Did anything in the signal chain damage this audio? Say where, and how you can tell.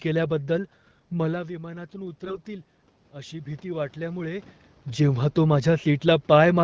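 Yes. From 1.32 to 4.53 s the speech and the room noise swell together, rising by about 6 dB across roughly three seconds until just before "जेव्हा तो". This is automatic gain rising in the call processing stage. The talker moved away from the microphone at about 1.0 s, dropping the input by about 12 dB. The AGC answered slowly, lifting its gain step by step. Because it amplifies everything, the background comes up with the voice.

From 2.23 to 2.39 s the speech keeps its pitch and rough loudness but turns hoarse, scratchy and gargly. These are AMR bit errors at the network stage, affecting the AMR-WB stream at 12.65 kbit/s. A burst of corruption, heavy enough to flip around one bit in ten, hit the less protected bits of seven frames while the core checksum still passed. The decoder placed excitation pulses wrongly and used wrong gain and spectral values.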